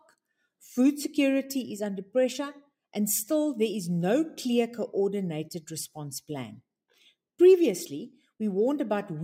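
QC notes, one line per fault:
No faults found. Nothing here needs a note.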